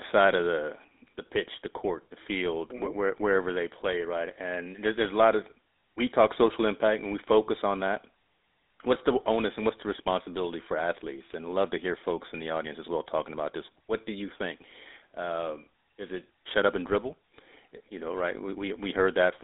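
From start to end, the speech carries GSM full-rate codec damage: pulse-driven vocal-tract modelling gives a plainly buzzy, gravelly roughness, consistent with 13 kbps coding. A spectrogram shows a band of about 300 Hz to 3.7 kHz, with nothing above 3.8 kHz.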